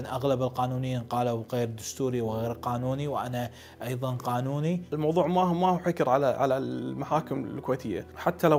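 Nothing in the audio stood out as a technical fault on listening.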